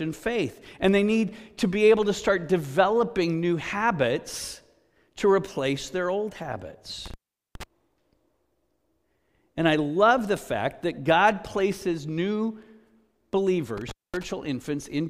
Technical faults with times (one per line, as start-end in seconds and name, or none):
7.06-7.63 intermittent contact
13.77-14.23 intermittent contact